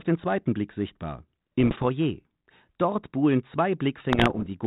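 A speech clip over a G.726-style telephone path, band-limited to 4 kHz and sounding like 32 kbit/s ADPCM. It has bit errors on an ADPCM link at 1.60–1.84 s and at 4.12–4.54 s. The second burst is heavier. The flipped bits throw off the decoder's step size and predictor, so you get pops and rough, level-jumping bursts that ring on briefly.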